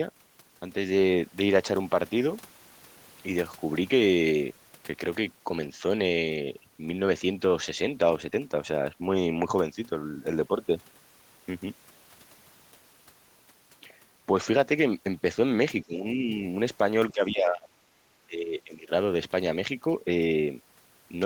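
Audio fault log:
15.84 to 18.91 s, speech suppressed in double talk: three dips, at 15.84–16.30, 17.12–17.68 and 18.25–18.91 s, each sinking roughly 15 to 20 dB. It's likely the echo canceller mistaking overlapping near-end talk for echo and squashing both together.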